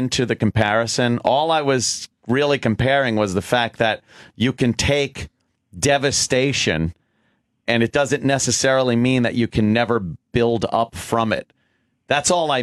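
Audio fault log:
No faults detected.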